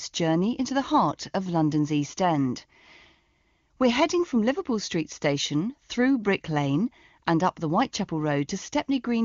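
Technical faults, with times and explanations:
No technical faults can be heard in the speech. It comes through the AMR wideband (HD Voice) codec sounding clear, with any coding damage faint at most, which fits its top rate of 23.85 kbit/s.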